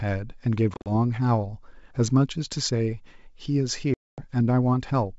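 Speech carried over a wideband G.722 link shows packet loss on an ADPCM call twice: scattered dropouts from 0.74 to 0.91 s (about ten packets, runs up to 40 ms) and 240 ms lost from 3.94 to 4.31 s. Each gap is silence-filled, and the decoder's predictor and step size lose sync with the sender's, so audio resumes slightly distorted.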